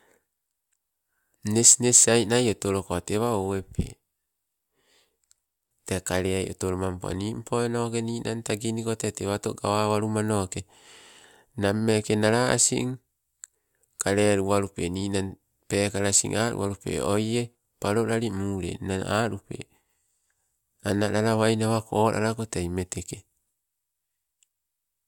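No technical faults detected anywhere in the recording; nothing to log.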